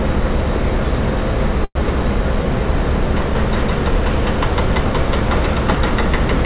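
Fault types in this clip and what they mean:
Call audio freeze: At 1.64 s the sound stops moving forward for about 0.14 s, until 1.78 s. The last sound carries on as a fading buzz or hiss for about 112 ms, the last roughly 50 ms of it silence. The cause is likely packets held up in transit, so the jitter buffer ran dry. Nothing is lost. The audio resumes where it stopped, now 112 ms later. The audio has nothing above 4 kHz, which fits a narrowband call codec.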